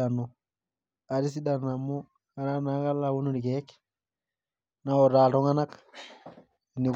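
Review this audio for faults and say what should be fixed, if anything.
Nothing to fix: no technical faults are audible anywhere in the speech.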